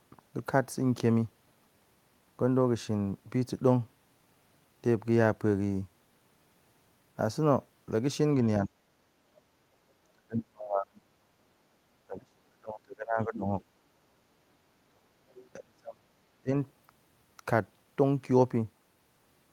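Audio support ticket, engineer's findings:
Speech suppressed in double talk at 8.66–8.73 s, 10.13–11.33 s, 12.05–13.52 s, 14.89–15.11 s, 15.55–16.05 s and 16.41–16.5 s. Talker level drops sharply, by about 25 to 40 dB at the deepest points, with the longest gaps at 10.13 s and 12.05 s. The likely cause is the echo canceller's double-talk handling: with both ends active, it can't separate near-end speech from loudspeaker echo, so it attenuates everything.

Other side's voice leaking through at 15.3–15.49 s, a brief fragment about 25 dB below the talker, between two suppression dips. Far-end audio from the talker's loudspeaker is reaching the microphone, likely as residual echo the canceller failed to remove.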